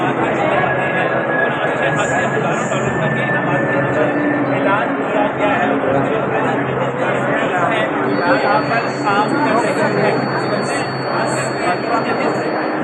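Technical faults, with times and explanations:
8.02 to 12.83 s, feedback whistle: a thin, steady tone at 4.4 kHz sits roughly 20 dB below the sound through to the end, swelling and fading slowly in level. The likely cause is a loudspeaker-to-microphone loop held right at the edge of feedback, which sustains one frequency without letting it run away.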